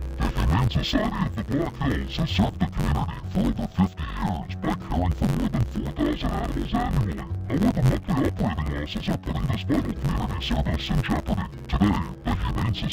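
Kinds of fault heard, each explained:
Interleaved audio read as planar: throughout, each 10.88 ms block's alternating left-right samples are split into halves and played at half speed, leaving the sound dull and robotic with a buzz near 92 Hz. Unlike a plain pitch shift, there is no clear octave drop.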